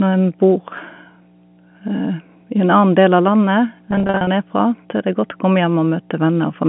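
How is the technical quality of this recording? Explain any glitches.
The recording has two faults: a steady hum under the whole clip and a stretch of broken-up speech just after the midpoint, all carried over a telephone-band G.711 line.

Mains hum runs throughout at 60 Hz. A ground loop or nearby transformer is leaking the power-line frequency into the signal path. The result is a constant low drone, roughly 25 dB below the speech, with a few low harmonics. It stays audible in pauses, where nothing masks it, and it persists beneath the 150 Hz to 3.4 kHz telephone band.

Packet loss with pitch repetition occurs from 3.91 to 4.27 s. About 220 ms of audio went missing, spread across those 360 ms as many short dropouts, the longest about 40 ms. The receiver covered each gap by repeating the last pitch cycle it had. Because every gap is brief, the concealment never fades to silence. Instead the speech catches repeatedly on slightly held, buzzy fragments, giving that third of a second a stuttering, mechanical texture.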